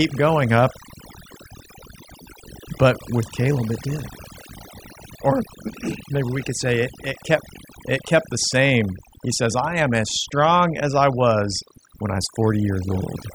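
Throughout the speech, overdone noise removal is audible. The noise reduction was set too aggressively. Frequency bands near the noise floor get pushed down or cut entirely, taking softer parts of the voice too. The background drops in level and breaks up into twinkling specks.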